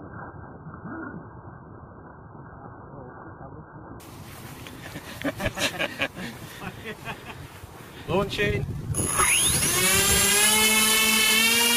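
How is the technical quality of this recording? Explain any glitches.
The recording has one clear fault, at the very start. From 0.0 to 4.0 s the audio is an adaptive stream starting at a low bitrate: the player began on a heavily compressed version to start quickly, then switched up once it had gauged the connection. Nothing is present above 1.6 kHz, so the sound is dull and smeared, which fits roughly 8 kbit/s AAC. At 4.0 s it abruptly brightens with no gap, consistent with about 96 kbit/s. A spectrogram shows a flat ceiling at 1.6 kHz that lifts sharply at 4.0 s, while the waveform stays continuous across the switch.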